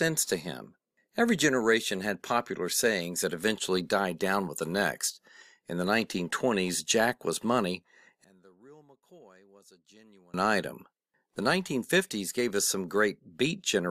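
From about 8.24 to 10.34 s the speech drops by about 30 dB and turns faint and distant, which sounds like one channel inverted, likely a polarity flip on one side, so the centred voice cancels when the two channels fold down to mono.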